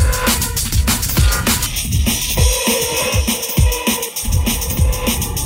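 From 1.66 s to the end, one channel runs about 0.3 ms late and is summed to mono, causing channel delay (comb filtering): regular notches from around 1.5 kHz make the sound hollow and phasey.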